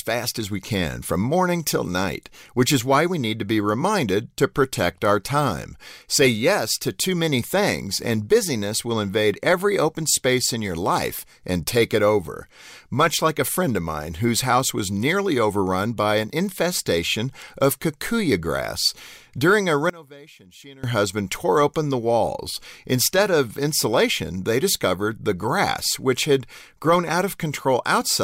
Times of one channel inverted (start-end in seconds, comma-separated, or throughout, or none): 19.90-20.84